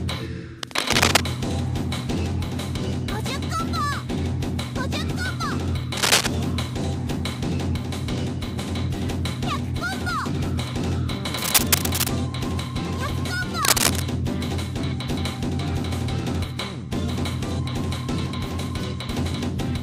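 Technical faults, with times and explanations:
0.63–1.23 s, 5.97–6.27 s, 11.38–12.08 s and 13.61–14.02 s, cable scratch noise: four short stretches of dense, irregular crackle and rustle sit on top of the sound, each lasting between about 0.3 and 0.7 s and rising to roughly 5 dB above the signal. The likely cause is a worn cable, plug or control being moved, so its contact resistance jumps about rapidly and injects uneven bursts of noise into the path.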